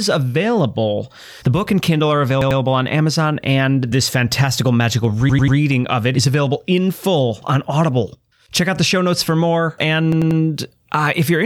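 Three repeated-buffer stutters occur in this speech, at 2.42–2.60 s, at 5.29–5.57 s (after "and this fantastical magical", before "of it is available"), and at 10.12–10.40 s (after "show notes for more"). Each time, audio arrived late and the device replayed its last block of about 93 ms, which fits a 4096-sample buffer. It played twice extra in the first event and three times in the others. The result is a machine-gun repeat with hard joins. Unlike a dropout, there is no silent gap, and no speech seems to go missing.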